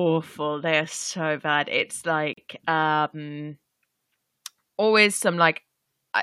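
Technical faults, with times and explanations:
2.33 to 2.37 s, gap between stream segments: the time stamps at a 2-second segment boundary leave a 40 ms hole, which the player fills with silence, so the speech stops abruptly with hard edges and resumes intact, with nothing lost, only delayed.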